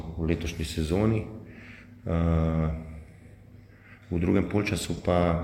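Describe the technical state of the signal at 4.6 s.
At 4.6 s the signal is intact, with no audible fault at that moment.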